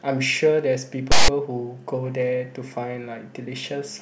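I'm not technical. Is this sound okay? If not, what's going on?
No. A block of the file's text labels was read as if it were sound, a fault called file tags played as audio. That produces a loud, rasping burst of static with abrupt edges in this speech, from 1.12 to 1.28 s, lopsided toward one side.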